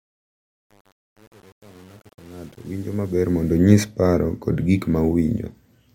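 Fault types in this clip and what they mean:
Truncation distortion on a fade: the speech fades in gritty through about 3.31 s before clearing at 3.57 s. The fade stage likely kept too few bits without dither, consistent with 8-bit resolution, so quiet passages collapsed into coarse square steps.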